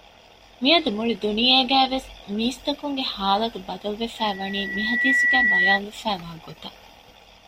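A speech clip with a clear loudspeaker feedback squeal running from about 4.18 to 5.80 s. A single tone near 1.9 kHz swells up over roughly a second until it sits a few decibels above the speech. That's the classic loop: the mic is hearing the speaker it feeds, and at 1.9 kHz the round-trip gain tops one, so that frequency keeps feeding itself until the amplifier limits it or the loop gets broken.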